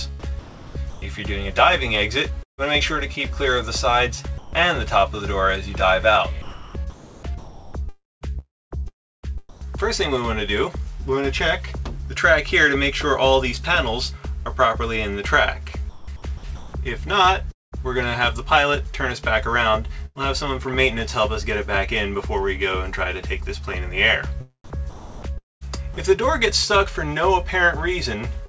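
From 0.3 to 9.67 s the sound keeps dropping in and out, with roughly 3 s of it swapped for a synthetic hiss. That's sound chopped by the voice detector, most likely the sender's detector flipping between sending and not sending, with comfort noise filling the holes. It happens again from 14.43 to 17.75 s, where about 0.65 s goes missing.

At 20.06 to 20.18 s there's a burst of packet loss. About 90 ms never arrived, so the receiver stretched the last bit of sound into a short fading tail. Playback then picks up again a little further on, with that slice gone.

From 24.78 to 25.97 s the voice-detector chopping comes back, with about 0.6 s of the sound replaced by that same synthetic background.

Right at the end, 28.46 s, there's a short concealed packet loss. About 30 ms went missing and was patched by carrying the last sound forward, which leaves a quick smear as the clip closes. Through the whole clip the call path tops out at 8 kHz, which fits G.722.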